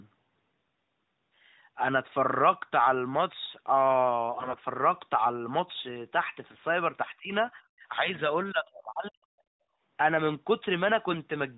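AMR bit errors hit this speech clip twice, from 4.32 to 4.59 s and again from 6.52 to 6.64 s. The voice keeps roughly its pitch and loudness but turns hoarse, scratchy and gargly. The first burst is the rougher one, fitting a bit error rate of around 10 percent against about 5 percent in the second. On a weak radio link, the lightly protected bits of the AMR-NB frames were corrupted while the check on the essential bits still passed, so the decoder used the damaged frames. Their excitation pulses landed in the wrong positions, and the fine gain, pitch and spectral values were wrong.

Speech suppressed in double talk follows from 7.06 to 8.16 s. The voice dips, thins and breaks up in pieces for about 0.7 s in total, at worst falling by a very deep margin. The likely cause is the echo canceller failing to separate the near talker from the far side's loudspeaker echo and attenuating everything the microphone picked up, including the near talker.

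Background gated by the echo canceller comes at 9.67 s and lasts 150 ms. The room sound falls away by about 30 dB and then returns. While the loudspeaker was active, the canceller clamped the microphone path hard and then released it, briefly punching a hole in the ambience.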